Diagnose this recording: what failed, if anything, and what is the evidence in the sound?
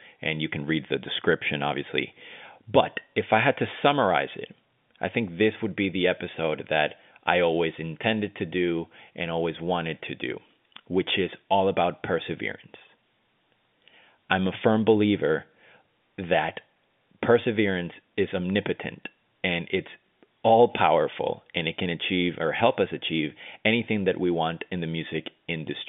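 Nothing here has failed: the speech comes across as an ordinary phone call over G.711 telephone coding, with the usual narrow line band of roughly 150 Hz to 3.6 kHz that you'd expect from an A-law telephone path.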